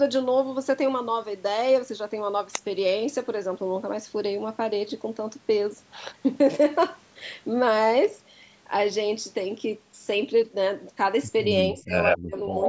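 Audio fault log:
11.72–11.93 s, speech suppressed in double talk: the speech dips by about 25 dB for around a fifth of a second, likely because the echo canceller mistook overlapping talk for echo.
12.03–12.18 s, echo leak: a second copy of the speech arrives 124 ms late, about as loud as the original, likely loudspeaker pickup the canceller failed to remove. The fixed lag separates it from room reverberation.
12.18–12.53 s, speech suppressed in double talk: a deeper cut of about 35 dB, again affecting roughly a fifth of a second in pieces, likely the canceller ducking during simultaneous speech. The level is pulled down, with no delayed copy added.
12.63–12.68 s, echo leak: the 124 ms delayed copy returns at near full speech level right at the end, likely residual loudspeaker echo leaking through. Its repeated, identical delay marks it as echo, not reverb.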